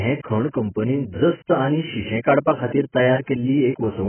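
From start to finish the speech is band-limited, with nothing above about 3.1 kHz, so it sounds dull and boxy. Sibilants come out as a smeared, fizzy hiss, and sustained vowels warble. The likely cause is heavy AAC compression. At a very low bitrate, roughly 10 kbps, the AAC-LC encoder lowers its cut-off and starves the remaining bands of bits, leaving spectral holes and noisy fill that make the sound swirl.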